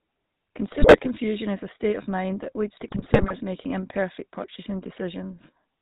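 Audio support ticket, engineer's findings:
GSM full-rate codec, whole clip: buzzy, gravelly roughness on the speech, nothing above 4 kHz, consistent with a 13 kbps full-rate stream. Cause: vocal-tract filter driven by a thinned, regularly spaced pulse excitation. Unlike simple band-limiting, the grit sits inside the band and stays constant.

GSM bit errors, 0.72 to 1.09 s, ending just before "is a state of": squawks, pops and gargling. Probable component: speech decoder fed corrupted frames, likely a weak radio link. Damaged filter, pitch or gain parameters warp the spectrum or spike the level frame by frame.

GSM bit errors, 2.76 to 3.35 s, between "of mind that leads" and "making imperfect purchasing": longer burst, same squawk and gargle. Differs from packet loss: audio never drops to silence or repeats, it distorts wildly instead.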